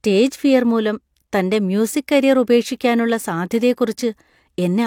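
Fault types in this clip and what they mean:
No faults are audible.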